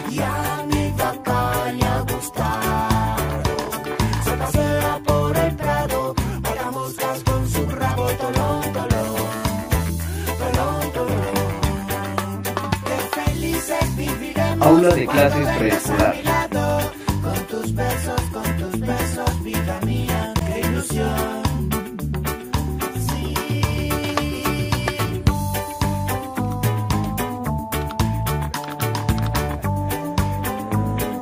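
No faults can be heard anywhere in this recording.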